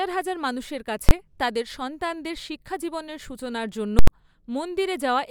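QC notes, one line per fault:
1.09–1.11 s, invalid numbers at full scale: a single hard bang right after "হাজার মানুষের" and before "তাদের সন্তানদের শিক্ষাজীবনের সূচনার". A calculation yielded infinite or invalid values that clamped to maximum amplitude for about 21 ms, which fits a 1024-sample block too short to separate into two pops.
3.99–4.08 s, invalid numbers at full scale: a loud pop, a silent gap, then another pop, just after "সন্তানদের শিক্ষাজীবনের সূচনার জন্য". Invalid values pinned the output at full scale for about 85 ms, which fits a 4096-sample block. The sharp jumps into and out of that block make the pops.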